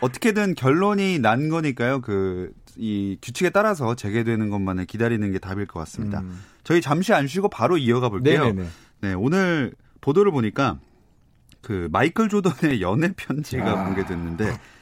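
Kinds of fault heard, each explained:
Repeated buffer: late audio made the device replay its last 1.33 ms block once, which fits a 64-sample buffer, giving brief clicks at 9.74 and 12.71 s.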